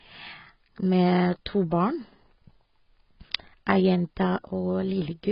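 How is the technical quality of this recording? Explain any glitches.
The technical quality is poor, with heavy codec damage across the whole recording.

AAC compression, throughout: the speech is dull and band-limited, with nothing above 5.5 kHz, and sibilants and sustained vowels carry a warbling, fizzy smear. The likely cause is low-bitrate AAC-LC encoding, which fits about 16 kbps. With so few bits, the encoder lowers its cut-off and quantises the remaining frequency lines coarsely against its hearing model, leaving gaps and swirling artefacts in the spectrum.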